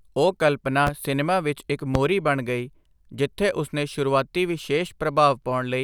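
A sudden voltage step or spike, likely from a plug, switch, static discharge or driver glitch, has twice entered the signal chain, and the circuitry after it has shaped each spike into a short burst. The result is a loud pop at 0.87 to 0.90 s, standing roughly ten decibels above the speech, and a second, stronger one at 1.95 to 1.98 s, about fifteen decibels above it. Each is a single sharp thump, and the speech carries on beneath both.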